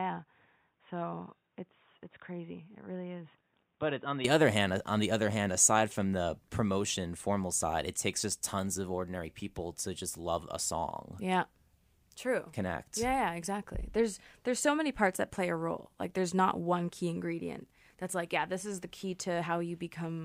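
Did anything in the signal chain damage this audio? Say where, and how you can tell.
Yes. At the input stage, the capture likely switched to a poorer device for the first 4.25 s: the speech has nothing above 3.8 kHz, sits about 10 dB quieter with a noise floor about 45 dB down, then opens up without a gap before "other hand uh on".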